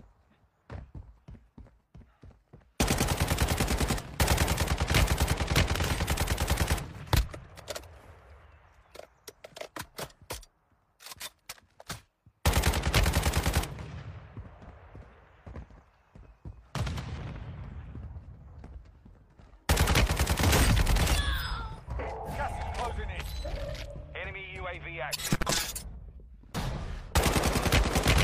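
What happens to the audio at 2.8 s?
Nothing goes wrong at 2.8 s: the audio plays through that moment intact, with no dropout, click, distortion or other audible fault.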